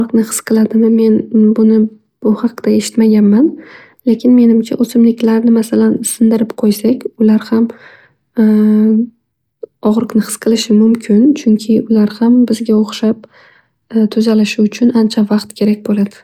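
A speech recording, and nothing is technically wrong with it.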